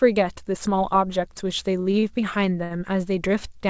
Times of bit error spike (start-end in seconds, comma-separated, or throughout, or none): none